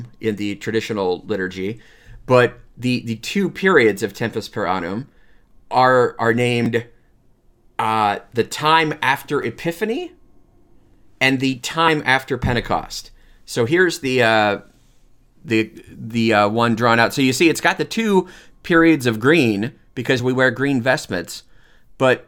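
Two tiny stutters break this speech recording, at 6.65 s and 9.42 s. Each is a quick click-like catch where a very short slice of sound plays twice with a hard edge at the join. That is a repeated buffer: fresh audio did not reach the output in time, so the device played its last 10 ms buffer once more, and roughly 10 ms of real audio was lost each time. The second fault is heard at 11.87 s and 20.18 s, where the audio jumps slightly forward. Instead of a sharp click, each join is a soft, smeared blip. This is compressed frames skipped: whole frames were missing or rejected as damaged by the decoder, and the overlap between neighbouring frames blurs the seam. At 11.87 s roughly 50 ms of audio is gone, which fits two 23.2 ms frames. At 20.18 s about 20 ms is gone, which points to a single frame.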